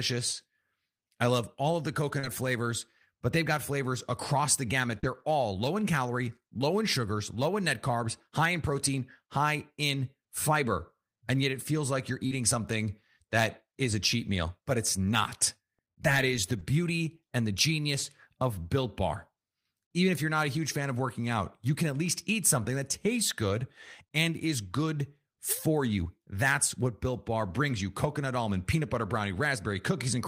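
At 2.19, 4.99 and 12.27 s the speech has short concealed packet loss: roughly 40 ms of audio arrived too late, so the decoder extended the preceding sound and then blended back. Each gap comes across as a quick smear or wobble.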